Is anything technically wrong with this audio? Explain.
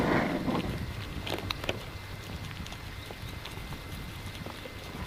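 No, nothing is technically wrong with this audio.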